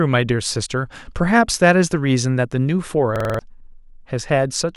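At 3.16 s the speech locks into a system hang loop until 3.39 s. The system stalled while the sound hardware kept replaying its buffer. One 46 ms slice, which fits a 2048-sample buffer, repeats five times at 21.5 Hz. It sounds like a rapid stutter, and about a fifth of a second of speech is lost.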